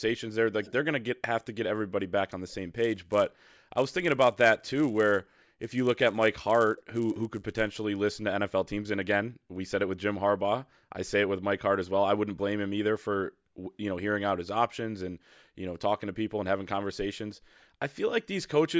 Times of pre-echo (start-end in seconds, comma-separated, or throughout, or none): none